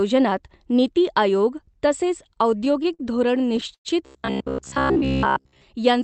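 Speech carried over a call link whose Opus coding cuts the highs above 8 kHz, and it drags in two places. Just after "नीती आयोग तसेच", from 2.23 to 3.01 s, it stutters through seven brief holds of up to 48 ms. From 3.41 to 3.87 s there are four more, the longest 110 ms. These repeated stalls (stutter) happen when packets arrive late, the jitter buffer runs dry, and the receiver stretches the last sound until audio resumes. Nothing is lost, but timing suffers. From 4.06 to 5.62 s most of the sound turns into a rigid metallic buzz near 66.8 Hz. This robotic sound from repeated short buffers likely comes from the software looping a roughly 15 ms buffer while fresh audio arrives too seldom.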